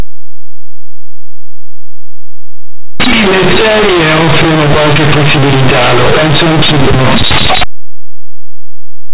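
From the start of the speech to the end, the audio suffers from companded audio read as linear: mu-law bytes are being played back as plain 8-bit samples without expansion. Because mu-law stores a sign bit and a logarithmic magnitude in each byte, every sign change flips the output across roughly half its range, so quiet passages come out as loud as peaks. The result is harsh, buzzy distortion throughout, with heavy noise filling the pauses, over an 8 kHz-sampled telephone-band mu-law path.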